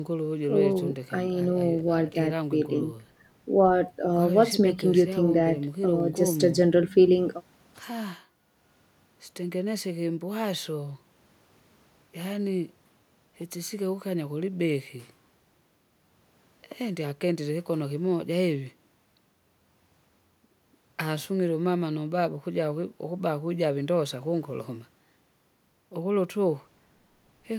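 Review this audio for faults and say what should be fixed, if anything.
No faults turn up in this audio, so nothing should be fixed.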